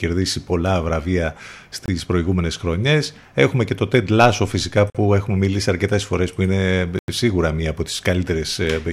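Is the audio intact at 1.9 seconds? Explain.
No. From 1.86 to 1.88 s the speech drops into a block of digital silence about 23 ms long, which fits an unfilled 1024-sample output buffer. The signal cuts out and back with no fade, so the gap is heard as a short hole.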